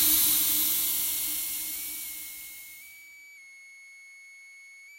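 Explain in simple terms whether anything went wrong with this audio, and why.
A switching supply whistle runs through the whole clip: a thin, high whine sitting well below the main sound, wandering between about 2.1 and 2.3 kHz. It comes from a power supply buzzing audibly as its load shifts, and the recording picked it up.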